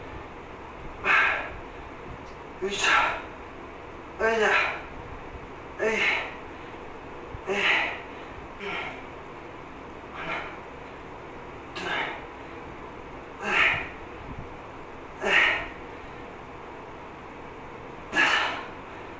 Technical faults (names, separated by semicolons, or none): skip ahead